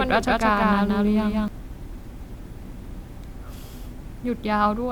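From the opening until 1.48 s, the speech is a doubled audio track: a second full-band copy trails about 200 ms behind at roughly equal level, likely from a slower capture path. Unlike an echo, it has no decay or room colour and cuts off abruptly.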